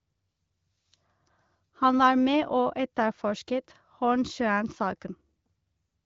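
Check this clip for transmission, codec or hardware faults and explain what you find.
No faults are audible in this recording.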